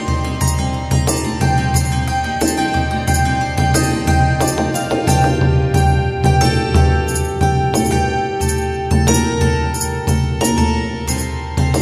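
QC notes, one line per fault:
No faults heard anywhere in the clip.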